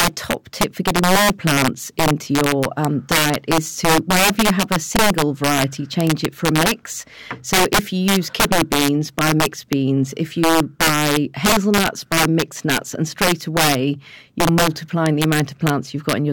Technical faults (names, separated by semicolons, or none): integer overflow